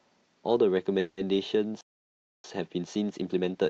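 Around 0.99 s the speech hits what sounds like a call audio freeze, running to about 1.19 s. For roughly 180 ms the last bit of sound gets stretched into a fading buzzy smear instead of going quiet, which is what a receiver does when its jitter buffer has likely run dry because packets got held up in transit. When they show up, the speech carries on right where it left off, so nothing's lost. You just get a stretch of filler wedged in and everything after it shifted about 180 ms later.

Then from 1.81 s to 2.44 s there's a proper playback stall: the output just goes dead mid-flow for about 630 ms. That's long enough to feel like a hiccup rather than a pause, and the likely culprit is the player starving for data or its thread getting blocked.

Straight after, from 2.44 s through to the end, you can hear time-compressed catch-up. The player is clawing back that backlog by snipping out tiny slices and cross-fading over the joins, so the speech runs about 1.15 times faster while keeping its normal pitch. 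It comes across as hurried. Underneath all of this there's the usual call-codec character, with the top end rolled off above about 8 kHz, which fits an Opus call path.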